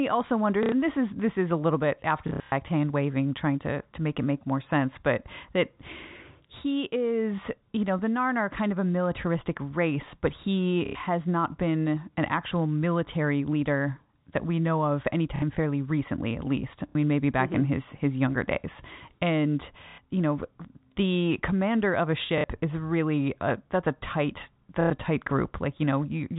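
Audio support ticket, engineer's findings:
Short robotic stutters: 0.63–0.72 s, 2.28–2.52 s (scattered), 10.86–10.95 s (after "militaristic race but he"), 15.36–15.42, 16.89–16.95 (after "fairly recently at least"), 19.89–19.98, 22.38–22.44, 24.81–24.90 s (after "a that's a tight"). Packet loss with last packet repeated. Gaps of 60–90 ms filled by replaying the previous packet, which fits 30 ms packets. Repeats ignore pitch period; longer runs buzz near 33 Hz. Band limit at 4 kHz consistent with G.711 telephone coding.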